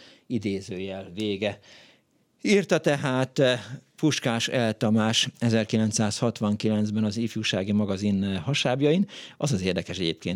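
A short stretch of recorded speech, and there's nothing technically wrong to point to anywhere in it.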